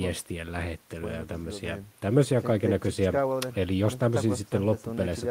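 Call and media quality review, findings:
No findings in this call and media quality review.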